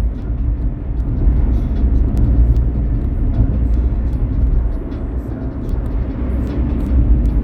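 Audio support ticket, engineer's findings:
Word clock ticks, 0.22 s to 7.26 s. Short sharp ticks of uneven strength, roughly every 0.4 s, about 20 in all. Probable component: receiving device on the digital input, free-running instead of locked to the source clock. Mechanism: the two clocks differ by roughly 50 ppm. Each slip drops or repeats one sample, causing a tick. Fix: slave receiver to incoming word clock.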